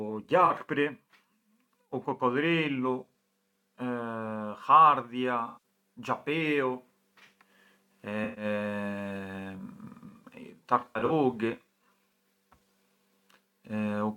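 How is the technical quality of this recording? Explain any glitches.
Four dropouts occur, all AAC frame loss with concealment. They hit at 0.45–0.51 s (about 43 ms missing), 5.46–5.59 s (about 171 ms), 8.24–8.45 s (about 128 ms), and 10.80–11.11 s, where about 171 ms is lost in scattered bits, the longest run around 70 ms. When AAC frames go missing, the decoder patches the gap by reusing the last good spectrum, so the speech there turns into a smeared, noisy or phasey wash.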